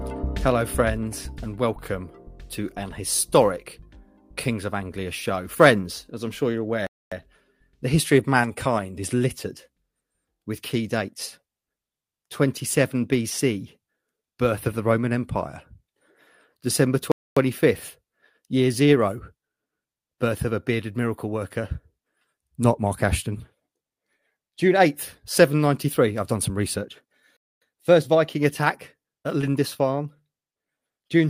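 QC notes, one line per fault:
6.87, 17.12 and 27.37 s: gap between chunks, a 250 ms hole every 10 s where silence is left at each chunk join, with no sound lost.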